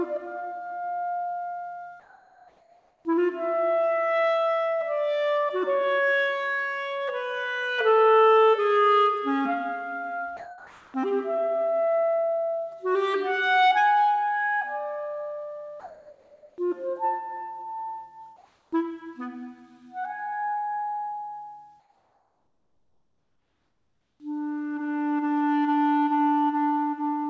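From 2.00 to 3.05 s, 10.37 to 10.94 s and 15.80 to 16.58 s, there is sound dropped by the voice detector. Each time, the sound gives way to a flat, steady hiss and returns when the detector reopens. About 0.51 s, 0.57 s and 0.43 s of real sound are lost in those stretches. Each gap is likely the sender's voice activity detector misjudging quiet sound as background and halting transmission, with the receiver filling in synthetic noise.

From 18.36 to 18.72 s and 21.80 to 24.20 s, comfort noise replaces the background. Here the detector had already stopped sending during pauses, and the real ambience, about 40 dB and about 48 dB below the loud passages, is swapped for featureless generated noise. This is likely discontinuous transmission with comfort-noise fill. The substitute sits about 1 dB above the real background in the first pause and about 4 dB below it in the second. Through the whole clip, the call codec's band limit leaves nothing above 8 kHz, which fits G.722.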